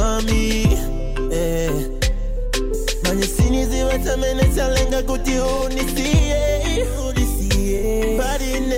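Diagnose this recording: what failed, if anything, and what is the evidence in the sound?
AAC frame loss with concealment at 5.55–5.62 s and 7.77–7.84 s: the decoder filled about 43 ms gaps, consistent with one lost frame each, from the previous spectrum, leaving brief smeared, noisy patches.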